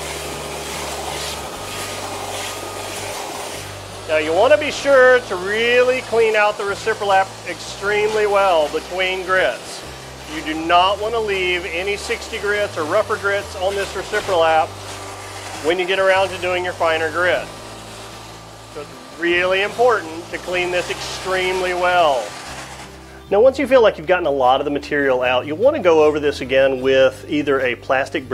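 Nothing in the audio stood out as a fault on listening.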